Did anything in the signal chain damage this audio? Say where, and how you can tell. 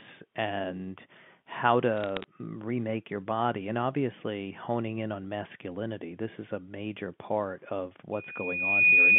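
Yes. Bit errors on the digital phone line corrupted the G.711 stream between "and how" and "mm remake your body", from 1.97 to 2.24 s. Flipped sign and high-order bits turn single samples into sharp ticks, heard as a short burst of crackle over the speech.

Loudspeaker feedback squeal takes over from 8.13 s, right after "a major part of", and runs to the end. The microphone picks up its own loudspeaker, and loop gain above unity at 2.5 kHz lets that tone swell over roughly 0.7 s until it sits about 10 dB above the speech.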